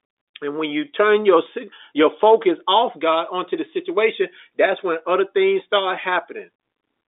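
Nothing goes wrong at any point in the recording. The speech arrives over a working G.711 telephone path, so it occupies the narrow line band of about 250 Hz to 3.7 kHz, with nothing above 3.8 kHz.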